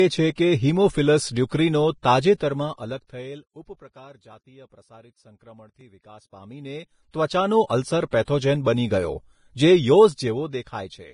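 Throughout the speech there is heavy grainy hiss and nothing above 10.5 kHz, likely Vorbis compression at a low bitrate near 27 kbps, with coarsely quantised treble replacing fine detail.

Pre-echo appears at 0.35 to 0.38 s just before "કે હીમોફિલસ", at 1.50 s after "છે કે હીમોફિલસ", at 2.02 s, and at 7.26 to 7.30 s after "વિકાસ પામીને". Block-spread noise leaks into the quiet gap, so a short hiss comes before each attack rather than after it, which tells it apart from reverb.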